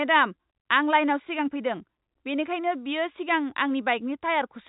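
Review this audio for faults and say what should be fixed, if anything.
Nothing needs fixing: the speech sits entirely within the G.711 telephone coding band, with nothing above 3.8 kHz and at most a faint, level-following grain from its 8-bit logarithmic steps, which is how that format normally sounds.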